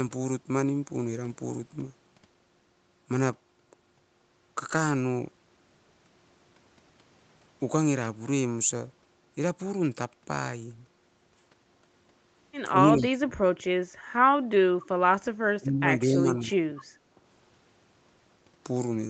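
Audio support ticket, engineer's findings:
Speech suppressed in double talk, likely echo canceller misjudging both ends as echo. Near-end speech ducked at 12.87–13.71 s (deepest drop about 30 dB, most of that span affected), then 15.59–15.88 s and 16.06–16.69 s (about 20 dB each). Speech dips hard while the far side talks over it. Audio band tops out at 8 kHz throughout, consistent with Opus wideband at roughly 32 kbps.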